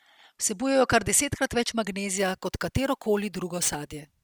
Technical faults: crude rate conversion

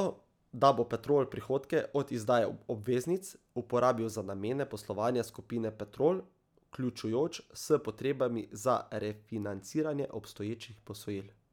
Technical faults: none

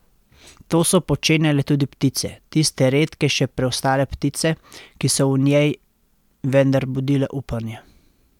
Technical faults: none

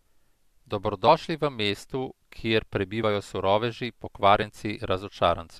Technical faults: compressed frames skipped

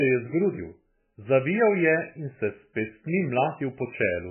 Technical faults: MP3 compression

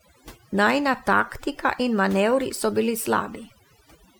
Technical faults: overdone noise removal

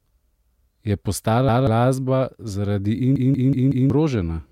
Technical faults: repeated buffer

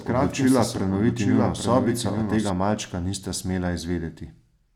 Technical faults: doubled audio track

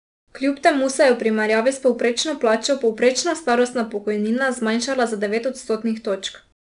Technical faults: 4-bit ADPCM compression

